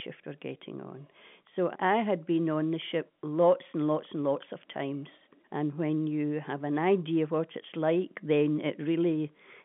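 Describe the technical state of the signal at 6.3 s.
At 6.3 s the speech comes through intact, with nothing audible beyond the narrow band of the telephone line it was carried over.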